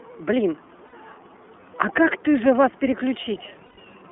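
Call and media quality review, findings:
iLBC codec throughout: narrowband, roughly 250 Hz to 3.5 kHz, audibly rough and synthetic. Frame-independent excitation coding, which fits the 30 ms, 13.33 kbps mode.

Lost iLBC frames at 0.87 s (60 ms) and 3.66 s (120 ms): buzzy held-vowel fill, the second one fading. Decoder repeats the last pitch cycle and recovers almost immediately.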